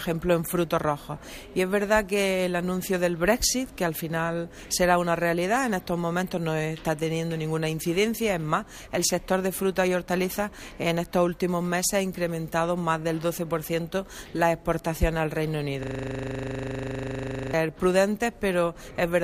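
At 15.83 s the sound suddenly locks into a system hang loop and stays stuck until 17.53 s. The machine or its driver froze, but the audio hardware kept replaying the same 40 ms chunk of its ring buffer over and over, some forty-odd times in all. With a loop that short, the repeats run together into a rough, steady buzz at 25 Hz, something between a drone and a very fast stutter.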